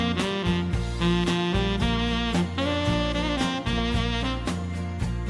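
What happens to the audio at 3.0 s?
Nothing goes wrong at 3.0 s; the audio there plays through intact, with no dropout, click or distortion.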